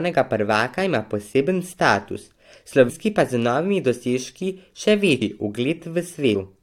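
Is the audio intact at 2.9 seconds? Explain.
No. Around 2.88 to 2.90 s, compressed frames were skipped, likely about seven 23.2 ms frames, so roughly 200 ms of speech vanishes and the audio jumps ahead.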